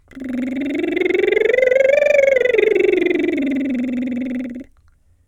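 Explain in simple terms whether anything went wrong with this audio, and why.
Imaging from linear upsampling runs through the whole music clip. The sample rate was raised by joining samples with straight lines, which fits a 24 kHz to 48 kHz conversion. The treble is dulled, and a faint mirrored copy between 12 kHz and 24 kHz adds a light metallic shimmer.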